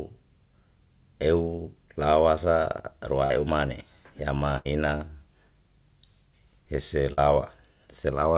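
From 3.26 to 3.32 s and again from 7.13 to 7.19 s, short concealed packet loss: about 40 ms of the call failed to reach the decoder in time each time. The receiver spun out the preceding sound for about 40 ms and then blended back, leaving a brief smeared wobble in speech that carries nothing above 4 kHz. From 4.58 to 4.67 s, a burst of packet loss removes about 60 ms of audio. The receiver extends the last sound for about 70 ms, fading it as a held buzz or hiss, and the speech resumes with that stretch missing.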